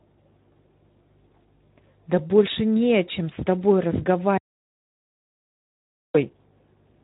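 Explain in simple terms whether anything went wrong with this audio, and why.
The speech sounds hoarse, grainy and muffled throughout, with nothing above about 3.8 kHz, because it passed through the Speex codec at a low-quality setting. From 4.38 to 6.15 s the sound cuts to total silence for about 1.8 seconds; this audio dropout to silence likely came from the input briefly being lost.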